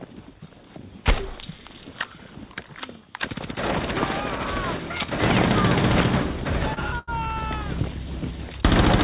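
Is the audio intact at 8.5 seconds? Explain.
Yes, at 8.5 seconds the audio is intact, carried through the WebRTC call path with its narrow telephone band that has nothing above 4 kHz.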